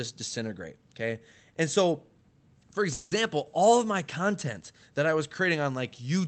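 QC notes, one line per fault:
2.93–3.13 s, call audio freeze: speech stalls while the last sound is stretched into a fading buzz for 180 ms, likely late packets emptying the jitter buffer. Unlike a dropout, speech then resumes exactly where it stopped, with nothing missing.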